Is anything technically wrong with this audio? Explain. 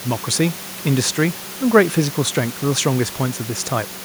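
No, nothing in this speech clip points to a technical fault. There is some background noise from the room, sitting about 17 dB below the speech, and it belongs to the recording itself rather than to any problem in the system.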